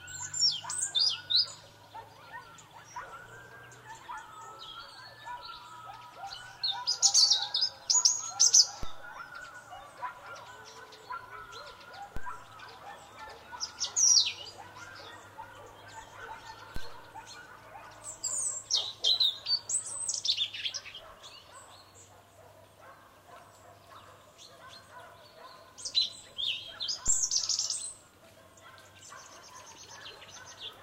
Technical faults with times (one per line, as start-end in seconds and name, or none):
8.83 DC step
12.17 DC step
16.76 DC step
27.08 DC step